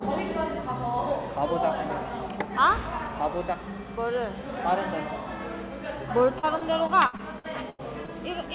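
From 6.39 s to 8.10 s the sound turns choppy as short pieces drop out and are papered over. This is repeated packet loss: eight gaps fall in that stretch, the longest about 88 ms, and each is filled by stretching the preceding sound, so roughly a fifth of the span is concealment. Throughout, the audio stops at 4 kHz, which fits a narrowband G.711-style call codec.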